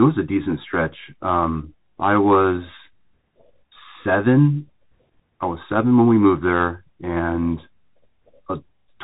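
Bluetooth CVSD headset codec damage runs through the whole speech clip, and it is plainly audible. The signal is coded as a single bit per sample, each one nudging the level up or down by an adapting step, a scheme that fits a 64 kbps headset link. Nothing above 3.8 kHz survives, so the speech sounds boxed-in and dull. Sibilants come out gritty, loud bright moments overrun the step and distort, and a grainy hiss sits beneath everything.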